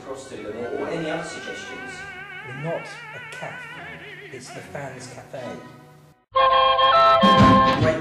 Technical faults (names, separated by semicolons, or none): hard clipping